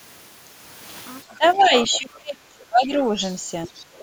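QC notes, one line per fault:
1.29–1.72 s, speech suppressed in double talk: the talker's speech dips by about 15 dB, around 0.2 s in all. This is likely an echo canceller turning everything down while the far side was also talking.
1.46–1.99 s, other side's voice leaking through: a second voice sits about 15 dB under the talker. This is likely loudspeaker echo the canceller failed to remove.
1.88–3.17 s, speech suppressed in double talk: the deepest cut, down about 25 dB, affecting roughly a second of speech. This is likely the same canceller clamping during overlap.
3.26–3.35 s, other side's voice leaking through: a brief scrap, about 25 dB down, likely residual echo.
3.66–3.73 s, speech suppressed in double talk: a quick dip of about 15 dB, likely suppression during overlap.
3.76–4.03 s, other side's voice leaking through: a faint tail, about 30 dB down, likely leftover echo.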